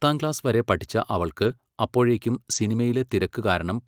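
At 1.43–1.53 s and 2.51–2.65 s, lost packets were rebuilt from error correction. Low-bitrate backup copies fill the gaps, so the sound turns briefly rougher and noisier. A spectrogram shows a smeared, grainy patch, with no dropout in the waveform.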